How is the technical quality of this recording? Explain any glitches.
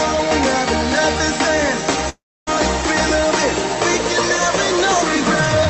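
Technical quality is compromised by two faults: a constant buzz and a gap in the audio.

Mains buzz runs throughout. Switching spikes from a 60 Hz supply leak in twice per cycle, stacking harmonics into a raspy buzz sitting roughly 15 dB below the signal.

Long network dropout, from 2.09 to 2.49 s, is the likely cause of the gap. About 0.38 s of audio never arrived. The receiver stretched the last sound into a fading buzz or hiss before falling near-silent, and the audio then resumes further on.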